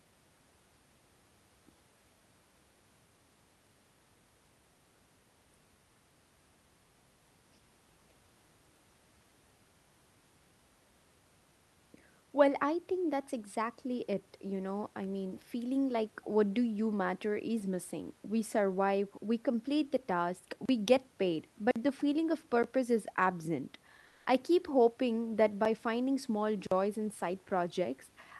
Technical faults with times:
20.65-20.69 block of digital silence
21.71-21.76 block of digital silence
22.63 block of digital silence
24.05-24.25 comfort noise in place of the background
25.65 block of digital silence
26.67-26.71 block of digital silence

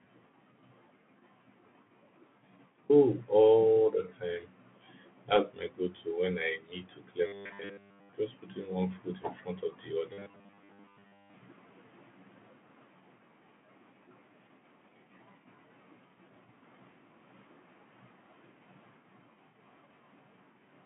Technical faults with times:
0.00-20.85 Bluetooth CVSD headset codec
7.27-8.12 robotic sound from repeated short buffers
10.13-11.34 robotic sound from repeated short buffers

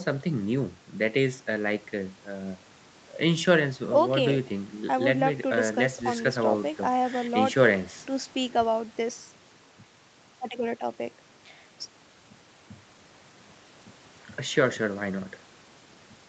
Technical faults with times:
none

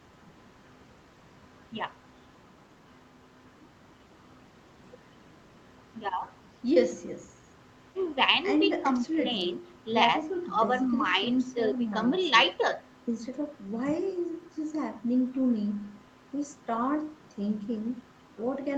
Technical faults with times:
none

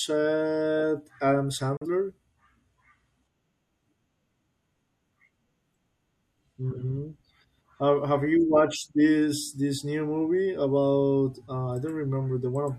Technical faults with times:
1.77-1.86 digital broadcast dropout

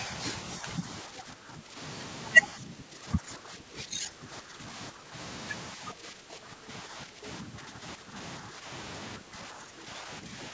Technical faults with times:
0.59-1.78 speech suppressed in double talk
2.52-5.14 speech suppressed in double talk
5.74-8.16 speech suppressed in double talk
8.41-8.68 speech suppressed in double talk
9.18-10.53 speech suppressed in double talk

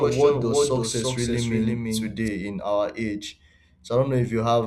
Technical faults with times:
0.00-2.28 doubled audio track

